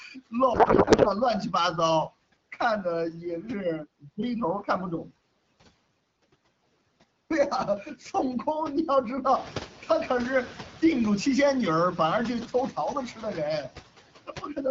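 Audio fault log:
throughout: noise suppressor artifacts, background pulled down by about 17 dB frame by frame, so residual noise dips between phrases and swells under speech.
0.53 to 1.11 s: codec payload misread, octet-aligned AMR frames decoded as bandwidth-efficient, so shifted bit fields turn speech into garbled warbling noise barely tracking it.
9.25 to 9.63 s: noise suppressor catching up, room noise jumps about 12 dB near 9.5 s and passes with only about 5 dB reduction until the estimate adapts over 380 ms.
14.27 to 14.58 s: speech cut by the noise suppressor, roughly a tenth of a second of speech mistaken for noise and dropped up to about 12 dB, sounding swallowed.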